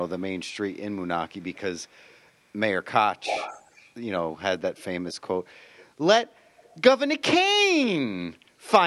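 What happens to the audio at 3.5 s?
Around 3.5 s the speech picks up a faint delayed double, trailing the voice by about 252 ms at roughly 10 dB below it, from 3.23 to 3.9 s. This is an echo leak, likely a far-end loudspeaker's sound reaching its microphone and slipping past the echo canceller back into the call.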